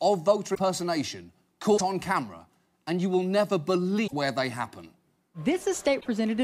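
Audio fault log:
0.54–0.59 s, 1.77–1.81 s, 4.06–4.13 s, 6.00–6.06 s, broken MP3 bit reservoir: the sound skips ahead into a brief chirp, noise burst or short gap, likely from dropped 26.1 ms frames leaving successors reading another frame's reservoir bytes.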